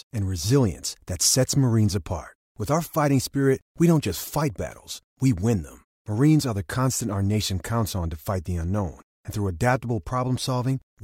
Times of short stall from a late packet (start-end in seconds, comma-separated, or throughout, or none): none